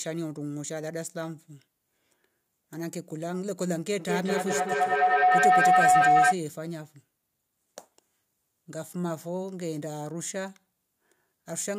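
Around 3.99 s a feedback howl starts up and runs until 6.41 s. Two devices in the same room are joined on one call, so sound from the loudspeaker gets back into the microphone and comes round a bit louder each time. It settles into a tone somewhere near 700 Hz, with the loop repeating about every fifth of a second, which is the round-trip time of the loop. At its peak it's about 11 dB above the speech.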